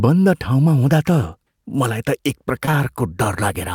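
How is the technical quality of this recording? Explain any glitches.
Two brief glitches sit close together near the end, both short concealed packet loss, at 2.65 to 2.69 s and again at 2.71 to 2.75 s. Each time about 20 ms of the call arrived too late for the decoder, and the receiver covered the gap by extending the preceding speech for roughly the same span before easing back into real audio. The result is a quick smear or wobble rather than silence, which separates it from a plain dropout or a hard digital click.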